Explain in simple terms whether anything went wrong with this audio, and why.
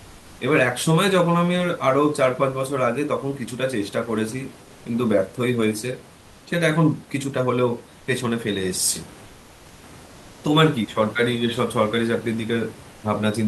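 Comfort noise in place of the background shows up in three pauses in the speech, at 7.99 to 8.07 s, 9.25 to 9.83 s and 10.05 to 10.43 s. The real room noise drops out, and a flat, slightly quieter hiss fills the gap, likely from the sender's discontinuous transmission during silence.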